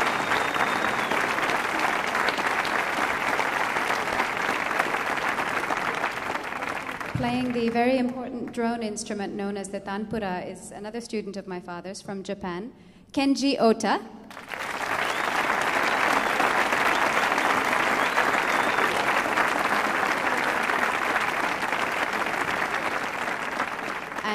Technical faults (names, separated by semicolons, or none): none